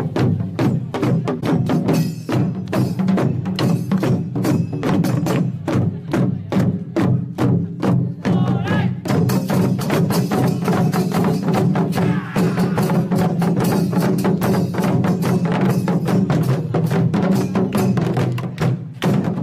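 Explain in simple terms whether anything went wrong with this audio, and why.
Something did go wrong, but only briefly. From about 1.40 to 1.44 seconds there is a corrupt frame concealed. A small piece of the compressed audio data arrived damaged. The decoder spotted the damage and covered it up by itself. The damaged stretch lasts about 34 milliseconds, which fits one damaged frame.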